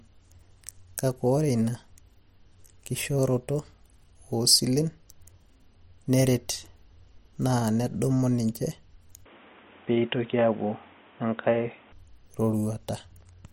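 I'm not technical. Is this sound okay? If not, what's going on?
No. An input switched to a poorer device, from 9.26 to 11.92 seconds. For those few seconds the speech turns dull and boxy, as if heard through a cheap headset, because nothing above about 3.8 kHz gets through, and a faint new background noise appears. The loudness stays about the same and there's no gap at the changeover. The likely cause is the recording system briefly picking up a different, lower-quality microphone before switching back.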